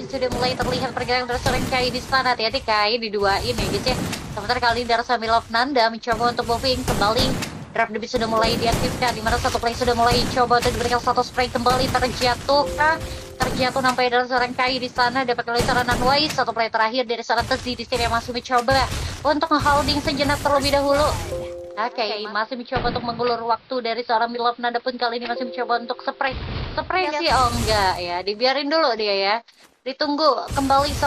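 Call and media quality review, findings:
Digital radio blending to analogue, 21.9–27.4 s. Hybrid receiver lost digital, crossfaded over 0.48 s to AM simulcast and back. Bandwidth collapses; level down about 2 dB; hiss rises to roughly 30 dB below signal.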